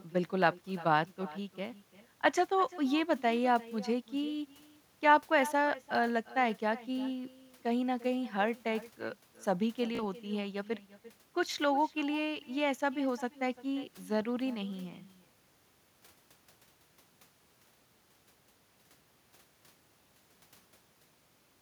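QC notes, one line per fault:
Throughout: echo with no canceller. Every phrase is trailed about a third of a second later by a fainter, thinner copy, about 19 dB down. The far end is playing the call through a loudspeaker, its microphone recaptures it, and nothing subtracts it before it returns.
9.95 to 10.03 s: Bluetooth stutter. A short buzzing repeat of the same tiny slice, then the sound jumps ahead. Around 30 ms of audio went missing, which fits two lost frames, and the receiver replayed its last buffer until fresh data arrived.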